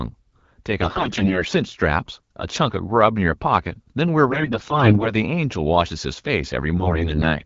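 The speech turns hoarse, scratchy and gargly from 0.81 to 1.44 s, again from 4.26 to 5.13 s, and once more from 6.78 to 7.37 s, while pitch and loudness hold roughly steady. These are AMR bit errors. The weakly protected bits of the wideband frames arrived flipped, worst in the first burst and lighter in the last. That misplaces the excitation pulses and skews the fine pitch, gain and spectral values.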